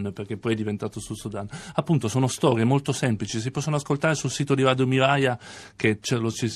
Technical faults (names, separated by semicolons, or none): none